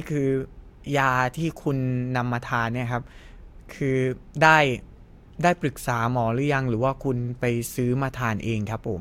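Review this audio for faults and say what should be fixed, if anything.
Nothing in this speech recording calls for a fix. No faults can be heard anywhere in it, so there is nothing to correct or prevent.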